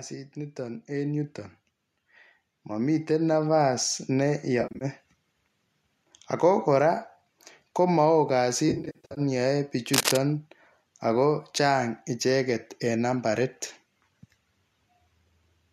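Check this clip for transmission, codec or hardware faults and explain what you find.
Three kinds of fault are audible in this speech clip: two gain swells, two patches of concealed frame loss, and one burst of scratching.

From 0.33 to 1.43 s and again from 2.67 to 3.9 s, speech and background swell together by about 5 dB. This is automatic gain rising, as the gain control hears a quiet input and slowly turns itself up.

Between 4.61 and 4.85 s, and again between 8.69 and 9.21 s, the speech turns smeared, noisy and phasey. This is AAC frame loss with concealment. The decoder rebuilds missing frames from the last good spectrum, about 160 ms lost across 0.2 s, then 340 ms across half a second, in runs up to roughly 70 ms.

From 9.94 to 10.17 s, dense rustling scratches sit over the speech at roughly its own loudness. This is cable scratch noise, likely from a worn connector or lead shifting and changing its contact resistance.

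The underlying low-delay AAC coding likely adds only light graininess.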